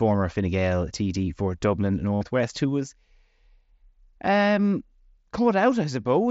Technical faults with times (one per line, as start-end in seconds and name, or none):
2.15-2.21 concealed Bluetooth headset packet loss